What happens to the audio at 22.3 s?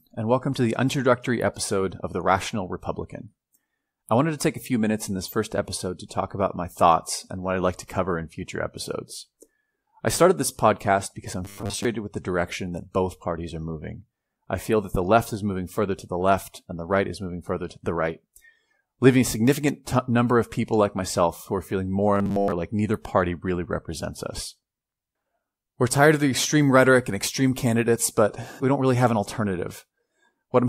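From 22.15 to 22.52 s the speech turns robotic. It becomes a rigid, metallic buzz at 100 Hz. This is robotic sound from repeated short buffers, likely caused by audio arriving too seldom. A 10 ms chunk repeats through most of the span, skipping real audio.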